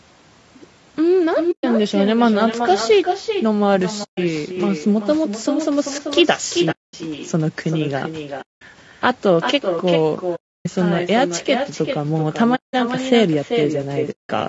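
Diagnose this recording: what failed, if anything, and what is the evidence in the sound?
Throughout the speech, a quieter, thinner copy follows each phrase roughly 0.4 s later, at about 6 dB below the direct sound. This is echo with no canceller. At the call processing stage, the far end's loudspeaker reaches its microphone, and nothing subtracts that path, so the round trip comes back.

The speech is rough and grainy from start to finish. Noise fills the gaps between harmonics, and the top band below the 8 kHz ceiling of the call's microphone processing sounds lowered or synthetic. This is low-delay AAC compression, likely AAC-ELD at a bitrate around 32 kbps. Its short frames resolve pitch harmonics poorly and leave too few bits for the rest of the spectrum.

Seven soft-edged holes occur at 1.51–1.64, 4.03–4.18, 6.71–6.94, 8.41–8.62, 10.35–10.66, 12.55–12.74 and 14.11–14.30 s, lasting 120 to 300 ms each. 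This is AAC frame loss with muting. Frames were lost on the network, the decoder zeroed their spectra, and the overlapping windows faded the sound out and back in.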